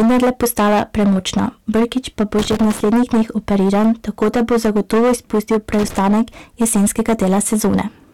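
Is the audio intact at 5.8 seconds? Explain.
No. Right after "da bo zagotovo izpustil", from 5.73 to 5.98 s, an irregular burst of scratchy crackle chops through the speech. That is loose connector crackle: a worn or dirty contact rapidly making and breaking the signal path. Beneath it, the speech has a harsh fuzz on its louder parts. This is hard clipping, with the signal driven about 12 dB past what the stage can pass, so around 15% of the samples are cut flat and their squared-off tops add high harmonics.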